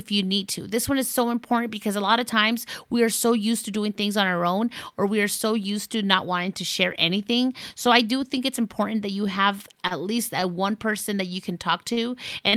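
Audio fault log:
9.87–9.93 s, 11.93–11.99 s and 12.49–12.55 s, short stall from a late packet: in each case the next packet of speech had not arrived when playback needed it, so the jitter buffer ran dry and the receiver held the last sound for about 33, 38 and 40 ms. Playback then resumed where it left off with nothing lost, so each stall adds its fill length to the delay. Each one sounds like a brief drawn-out sound with a faint buzz or dip.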